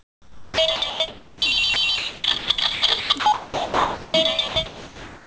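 A voice activity detector on the sending side likely kept switching transmission on and off, so this recording of sounds is chopped by the voice detector from 0.00 to 1.42 s, 1.74 to 4.14 s and 4.48 to 5.27 s. About 1.08 s, 1.44 s and 0.69 s of real sound in those stretches is swapped for comfort noise. The call path carries nothing above 8 kHz, consistent with G.722.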